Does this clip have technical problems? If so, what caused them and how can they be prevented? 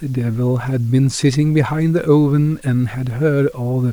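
Yes. A grainy distortion runs through the whole speech clip. It rides on the voice and changes with it. Quiet passages sound gritty, and the softest moments sputter or fall silent. The grain sits about 35 dB below the speech. The likely cause is low bit depth without dither. The audio was rounded to very few levels, which fits about 8 bits. Without dither, the rounding error tracks the signal. To prevent it, keep 16 bits or more, and add dither whenever you reduce bit depth.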